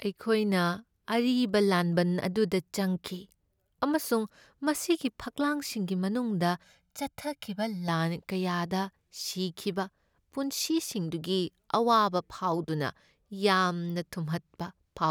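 From 6.63 to 7.89 s the speech goes hollow and phasey, which is channel delay causing comb filtering: one channel arrives roughly 1.5 ms late, and summing to mono carves evenly spaced notches, the first around 400 Hz.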